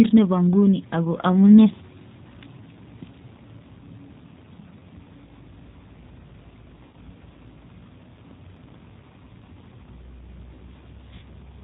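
Throughout, the speech carries G.729 codec damage, and it is plainly audible. The codec rebuilds each 10 ms frame from a vocal tract filter, a pitch predictor and a few pulses. That leaves the voice rough and slightly synthetic. Nothing above 4 kHz survives, so the sound is dull and narrow. The texture fits the 8 kbit/s G.729A variant.

From 6.83 to 6.95 s there is VoIP packet loss concealed by the speech codec. About 100 ms of audio never arrived, which fits ten lost frames. The decoder guessed from its last pitch and filter and lowered the gain each frame. The speech smears into a buzzy tone or coloured noise that fades. It happens again from 11.15 to 11.26 s, with about 70 ms missing. The voice stays weak briefly after each gap, because each frame builds on the one before.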